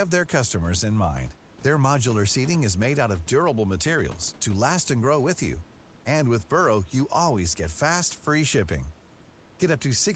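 No technical faults occur anywhere in the speech, so there is nothing to describe in time order.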